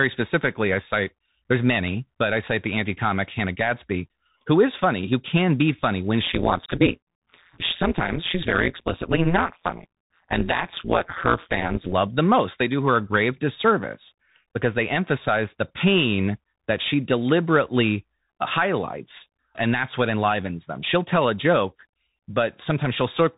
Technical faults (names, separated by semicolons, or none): Bluetooth CVSD headset codec; overlap-add ripple